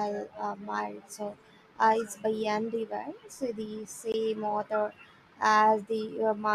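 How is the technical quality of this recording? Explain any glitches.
One glitch stands out in this speech recording. A gap at a join of encoded pieces appears at 4.12 s: the audio was likely encoded in separate sections and spliced without trimming the encoder's leading silence and end padding. The result is a dropout of about 19 ms, its edges smeared by the codec, before the speech resumes exactly where it stopped.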